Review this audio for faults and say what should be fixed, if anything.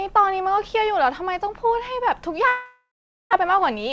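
A long network dropout runs from 2.48 to 3.35 s. The speech stops, and the last sound is stretched into a fading buzz. About 420 ms of near silence follows. Roughly 600 ms of speech never comes back, and the talk resumes past the gap. The likely cause is a burst of lost or badly delayed packets, which also added around 200 ms of delay. Prevent it with a steadier network link and forward error correction.

A jitter buffer speed-up follows from 3.43 s to the end. The speech plays at 107% speed, yet the pitch stays the same. It sounds hurried. The receiver is trimming short pieces of one or a few pitch periods, about 40 ms in all, to shed extra buffered delay. The G.722 path at 64 kbps, with nothing above 8 kHz, carries this through. Prevent it by smoothing out delay bursts so the buffer does not swell.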